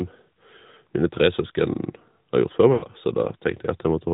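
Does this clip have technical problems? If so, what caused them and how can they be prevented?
Yes. The whole clip carries the sound of the AMR narrowband mobile codec. Everything above 4 kHz is gone, and the speech has that buzzy, synthetic edge of a vocal tract model driven by sparse pulses. The damage is plainly audible and fits the 10.2 kbps mode. To prevent it, carry the call on a wideband codec, or at least a higher AMR mode, end to end.

From 2.74 to 2.86 s there's a stretch of lost AMR speech frames. About 80 ms of audio failed its checksum, which fits four 20 ms frames. The decoder filled the gap by repeating the last good pitch and vocal tract settings at falling gain, so the sound smears out and fades there. Better radio coverage or stronger channel coding would keep those frames intact.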